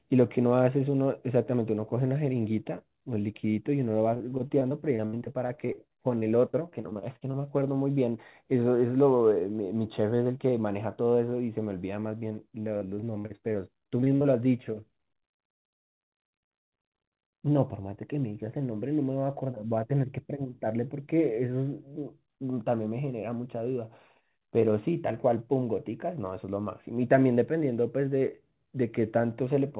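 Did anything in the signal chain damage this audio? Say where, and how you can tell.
Yes. From 4.14 to 7.35 s, and again from 12.77 to 14.26 s, the speech turns choppy and robotic, with fragments missing. These are repeated packet losses on the network leg. Each short dropout, the longest about 64 ms in the first stretch and 58 ms in the second, was papered over by extending the previous sound. This concealment fills roughly a fifth to a quarter of each stretch. The call codec's 4 kHz band limit is heard throughout.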